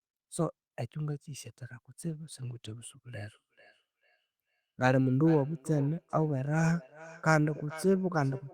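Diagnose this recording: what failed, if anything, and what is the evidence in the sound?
Network and codec stage: a call bitrate drop from 64 to 28 kbps, 2.01 to 3.09 s. The encoder codes more coarsely, so the speech turns rough.

Call processing stage: feedback echo between two devices from 3.22 s to the end. Repeats return roughly every 0.4 s, about -19 dB below the speech, thinner each time.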